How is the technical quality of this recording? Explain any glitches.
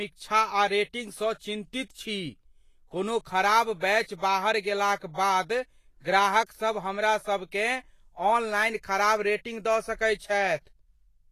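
The recording has plainly audible compression damage from start to finish.

Throughout, the speech sounds hissy and grainy, with nothing above 14.2 kHz, which points to Vorbis compression at a low bitrate around 32 kbps as the likely cause. The encoder keeps a smooth spectral outline but quantises the treble so coarsely that fine detail is swapped for noise of similar energy, roughening tones and softening consonant attacks. Unlike a steady background hiss, this graininess follows the speech and fluctuates with it.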